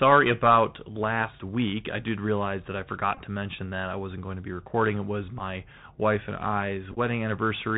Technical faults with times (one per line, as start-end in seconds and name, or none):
0.00-7.77 Bluetooth CVSD headset codec
3.15-3.20 Bluetooth headset packet repeated
5.39-5.41 Bluetooth headset packet repeated
6.92-6.98 Bluetooth headset packet repeated